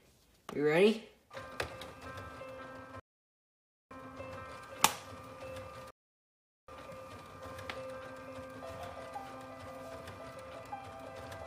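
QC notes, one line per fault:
3.00–3.91 s and 5.91–6.68 s, rebuffering stall: playback ran dry and went silent for about 0.91 s, then 0.78 s, resuming exactly where it stopped, so nothing's lost, just time added.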